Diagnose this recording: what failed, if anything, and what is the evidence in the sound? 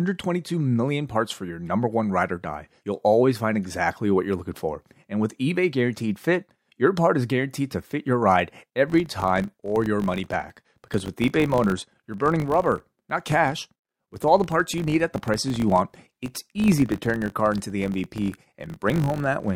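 A filter restarted on every block, in the call-processing stage. From 8.88 s to the end at 19.55 s, the speech carries a 50 Hz buzz that rises and falls with its level. The filter loses its state each block and starts from silence. This leaves a small tick every 20 ms.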